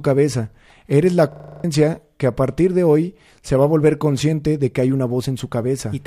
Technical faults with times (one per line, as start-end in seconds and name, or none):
1.32-1.64 system hang loop